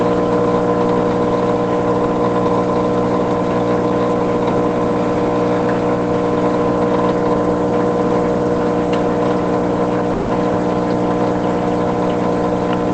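At 10.13 s the sound breaks off and, until 10.31 s, is replaced by a smeared, buzzy continuation of the last instant that fades without ever reaching silence. When the audio returns, it has skipped ahead, and about 160 ms of the original is simply gone. That missing stretch is what marks this as a likely long network dropout rather than a brief packet-loss glitch, which would resume in place. The band-limited call-codec sound (nothing above 8 kHz) is consistent throughout.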